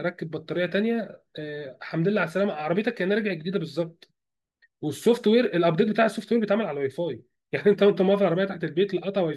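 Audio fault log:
Nothing to log here: this speech clip turned up no faults anywhere in it.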